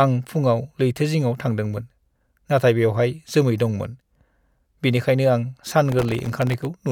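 A speech clip with gritty crackle from 5.89 to 6.66 s, a processor overload crackle: dozens of sub-millisecond buffers missed their deadlines, each leaving a hard-edged gap of silence.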